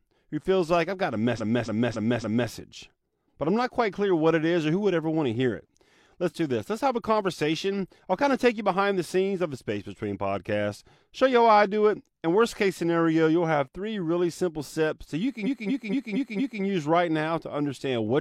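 Repeated frames: a block of compressed frames was played again, so 278.6 ms loops four extra times from 1.35 to 2.47 s, then 232.2 ms loops five extra times from 15.42 to 16.58 s. Each is heard as a stutter adding about 1.1 s.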